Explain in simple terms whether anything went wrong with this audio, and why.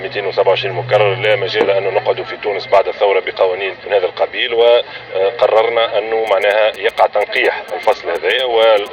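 A nearby mobile phone using the old 2G network interfered with the recording, producing GSM signalling bursts from 6.27 to 8.88 seconds. While exchanging short bursts of radio signal with the network, the phone's transmissions were picked up by the audio wiring and turned into sound. The result is a quiet, galloping dit-dit-dit of brief buzzes underneath the audio, pulsing about 217 times a second, which gives the buzz its low, rasping tone.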